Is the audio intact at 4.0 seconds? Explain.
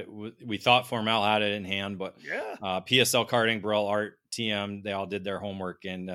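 Yes, the audio is intact at 4.0 seconds, with no fault to be heard at that point in the speech.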